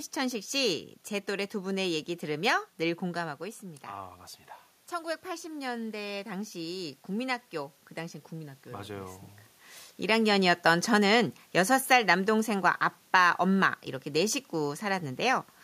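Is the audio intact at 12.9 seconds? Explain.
No. At 12.9 seconds the automatic gain control is partway through a gradual gain reduction that runs from 10.07 to 14.42 s. Having judged the input too loud or its background noise too strong, it pulls the level down by about 4 dB across that span. Because the gain is applied to the whole signal, the speech fades steadily and the room noise beneath it sinks by the same amount, unlike a talker simply moving away from the microphone.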